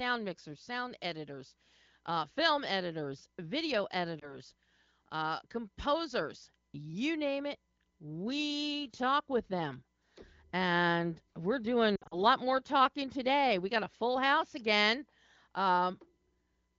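At 4.19 s, a lost AMR speech frame makes the wideband decoder repeat its last good pitch and vocal tract settings, causing a brief warble until 4.39 s. From 11.96 to 12.21 s, scattered losses (the longest run about 60 ms) make the speech drop to near silence. The waveform envelope visibly sags there.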